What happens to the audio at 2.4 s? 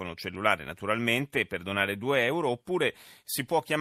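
Nothing goes wrong at 2.4 s; the speech carries on intact through that moment, with no break, click, dropout or change in level or tone.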